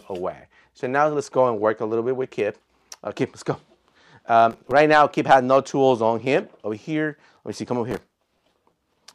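There are two bursts of processor overload crackle in this sound, a short one from 4.51 to 4.72 s and a longer one from 7.91 to 8.98 s. In both, the machine keeps missing its buffer deadlines and replays stale audio with hard edges, which comes out as gritty tearing. The fine grain suggests very short buffers, around a millisecond and a half. That works out to something like fifteen misses in the first burst and roughly a hundred in the second.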